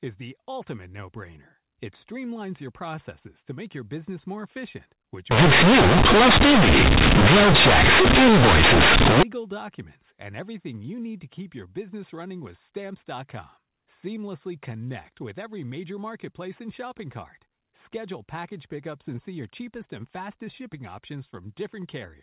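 From 5.31 to 9.23 s the A-law speech is companded audio read as linear, so raw bytes hit the output unexpanded: harsh, blaring buzz with loud noise in pauses.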